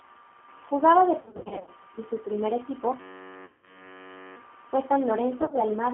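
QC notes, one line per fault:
Throughout: G.729 codec. The line runs through G.729A at 8 kbit/s, which rebuilds the speech from a vocal tract filter, a pitch predictor and a few pulses per subframe rather than sending the waveform itself. The band is held to roughly 250 Hz to 3.4 kHz, so the speech sounds thin and telephone-like. The damage is plainly audible as a rough, slightly synthetic edge on the speech.
1.21–1.70 s, 3.45–3.92 s and 5.42–5.61 s: VoIP packet loss concealed by the speech codec. Packets went missing, and the decoder extrapolated each gap from its last pitch and filter state while lowering the gain. About 310 ms is lost across the first 460 ms window, in runs up to 60 ms. There are 180 ms in the second window and 90 ms scattered across 160 ms in the third. Each gap smears into a buzzy tone or coloured noise that fades, and the speech stays weak for a while after packets return.
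3.00–4.36 s: system hang loop. The system froze while the sound hardware kept replaying one short ring buffer. A 10.67 ms slice, which fits a 512-sample buffer, repeats 128 times. Because the loop is so short, it comes out as a steady buzz at 93.8 Hz rather than a stutter. Little or no audio goes missing, and the second concealment gap falls inside this frozen stretch.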